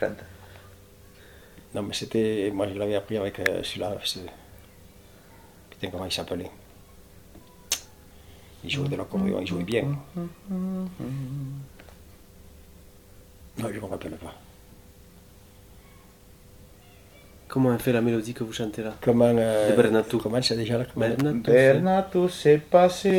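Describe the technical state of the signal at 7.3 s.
The signal is intact at 7.3 s, with no audible fault at that moment.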